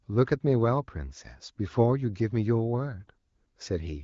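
Speech coded through AMR wideband (HD Voice), band-limited near 7 kHz and carrying the light coding texture that fits a rate around 15.85 kbit/s, with no technical fault to report.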